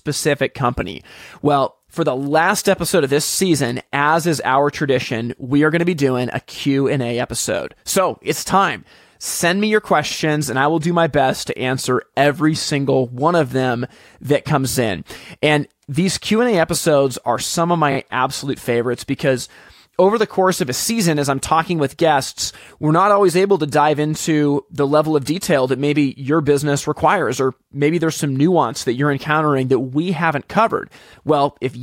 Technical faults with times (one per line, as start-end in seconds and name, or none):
14.70-14.75 repeated frames
17.91-17.96 repeated frames